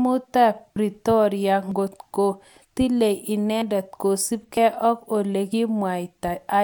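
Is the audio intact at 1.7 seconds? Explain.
No. At 1.72 s there is audio missing between chunks. The recorder or processor likely handles the signal in 1.0 s blocks, and in the handover from one block to the next a sliver of around 50 ms was dropped, with the two edges butted together and no silence inserted. What you hear is a small skip just before "ko tilei", where the speech jumps forward abruptly instead of flowing continuously.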